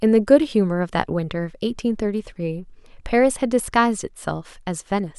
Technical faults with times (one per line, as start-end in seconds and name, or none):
none